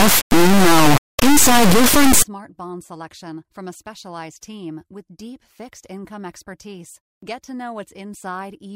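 It's a speech clip, and from the start to about 2.22 s you get an integer read as float fault: the samples sound like 32-bit integers being interpreted as 32-bit floats, so they land near zero or way past full scale. That's the brutal buzzing square wave, which drops out right before "bond selection from a".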